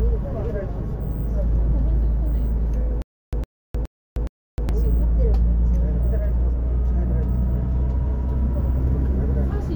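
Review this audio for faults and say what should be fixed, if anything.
Stutter with silent gaps from 3.02 to 4.69 s: a 109 ms burst of sound repeats four times, each followed by about 308 ms of digital silence, cycling every 418 ms. The likely cause is a playback or stream stall that replayed its last fragment on each retry. Enlarge the playback buffer and handle underruns so that stalled audio resumes cleanly instead of looping.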